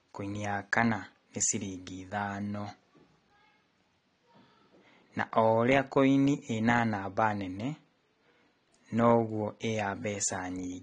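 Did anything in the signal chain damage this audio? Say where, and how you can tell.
Yes, and the damage runs through the whole speech clip. The most likely cause is AAC compression at the codec stage. Nothing is present above 9.7 kHz, and the retained band is plainly smeared, with a fizzy, warbling texture on sibilants and sustained vowels, which fits AAC-LC at a low bitrate around 32 kbps quantising its frequency lines too coarsely. A simple low-pass filter would dull the top but leave the band beneath it clean, without this texture.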